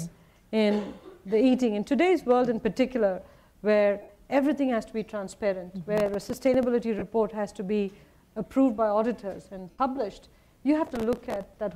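At 4.02 s, lost LE Audio frames, about 68 ms of them, force the LC3 decoder to reuse its last spectrum with random signs, which leaves a short noisy smear. From 5.98 to 6.63 s, processor overload crackle appears: the processor misses about 20 buffer deadlines of a few milliseconds each and plays old audio with hard edges in their place, heard as a gritty tearing. Further frame losses occur at 6.99 s (30 ms) and 9.70 s (about 83 ms), each with the same brief smear. The crackle returns from 10.87 to 11.61 s.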